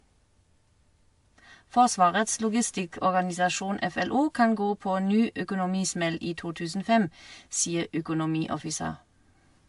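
Dull, smeared speech with nothing above 11 kHz throughout; this is likely transcoding between lossy codecs, artefacts consistent with AAC-LC re-encoded as WMA.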